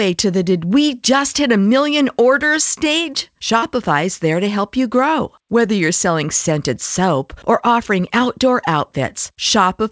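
At 3.58 to 3.64 s, short concealed packet loss: about 40 ms was patched by extending the preceding sound, heard as a brief smear, with smoothly repeated spectrogram texture.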